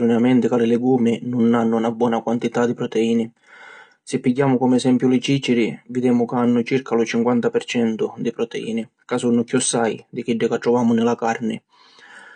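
Speech, and the whole thing carries AAC compression damage, likely from low-bitrate AAC-LC. Nothing survives above 9.8 kHz, so it's dull, and sibilants get that smeared, fizzy edge, which fits something around 32 kbps.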